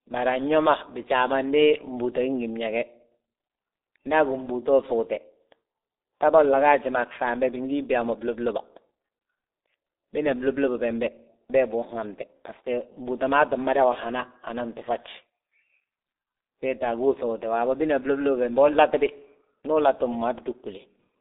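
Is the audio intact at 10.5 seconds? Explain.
No. Throughout the clip, speech passes through a G.723.1 codec at a bitrate of roughly 6 kbit/s, leaving nothing above 3.8 kHz, so at 10.5 s it sounds muffled and hoarse, with smeared consonants.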